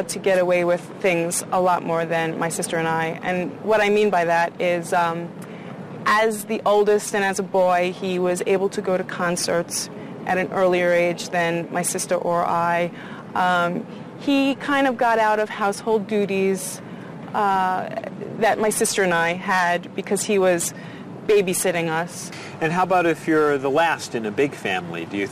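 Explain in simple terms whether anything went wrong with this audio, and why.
Nothing went wrong here: the signal stays intact throughout, with no technical faults to point to at any moment.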